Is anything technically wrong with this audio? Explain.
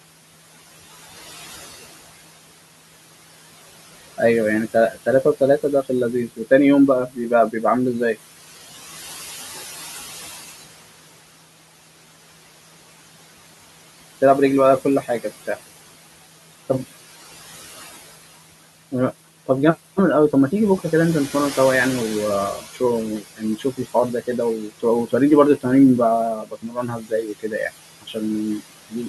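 Yes. Throughout, the background sinks between phrases and swells under the speech. These are noise suppressor artifacts: frame-by-frame, per-band gain pulls the room noise (about 15 dB below speech) down by about 17 dB.

At 4.74–6.4 s, 7.08–8.16 s, 23.37–25.65 s and 26.42–29.08 s, soft consonants and endings turn faint or swallowed, dipping by up to about 10, 15, 17 and 19 dB, briefly at first and for about a second near the end. This is speech cut by the noise suppressor, which mistakes quiet speech for noise.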